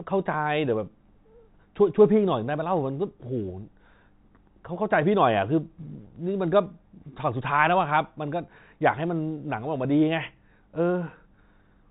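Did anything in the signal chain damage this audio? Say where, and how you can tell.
No, nothing in the chain damaged this speech; the empty band above about 3.9 kHz is just the normal ceiling of G.711 telephone coding, consistent with a 64 kbps mu-law path.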